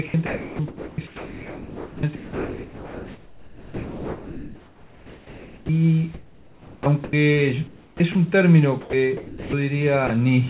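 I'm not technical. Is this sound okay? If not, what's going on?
No, not quite. From 0.08 to 5.69 s, and again at 6.14 to 7.13 s, 7.67 to 8.15 s and 8.81 to 9.53 s, the sound keeps cutting in and out. This is sound chopped by the voice detector. The sending end likely has a detector that decides when there's something worth sending, and here it kept switching on and off. Quieter bits got swapped for a soft artificial hiss, so the audio sounds choppy.

Near the end, from 10.07 to 10.10 s, there's a very brief gap, just a blink. That's sound dropped by the voice detector. The detector likely mistook that moment for background and stopped sending, so you hear a tiny patch of steady hiss instead before the sound comes back. It all comes through a phone-style call line that carries nothing above 4 kHz, so the top end is missing throughout.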